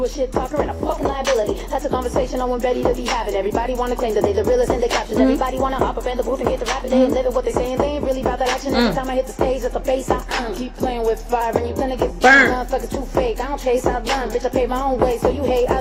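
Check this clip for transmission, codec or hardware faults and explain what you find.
Three drift correction steps are audible. From 0.98 to 1.81 s and from 5.16 to 7.37 s, the sound speeds up by 6.03% and rises about 101 cents. From 10.32 to 11.41 s, it slows by 6.03% and drops about 108 cents. Each time it snaps back. The likely cause is clock-matching software abruptly changing the playback rate to rebalance its buffer.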